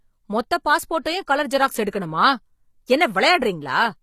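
Right through the speech the top end sounds synthetic, with gritty, lispy s sounds and nothing above 15 kHz, likely HE-AAC compression at something like 24 kbps rebuilding treble from copied lower bands. At 1.02 to 1.06 s there's a short pre-echo: about 34 ms of hiss smeared ahead of an attack, because the codec spread its block's noise before the transient.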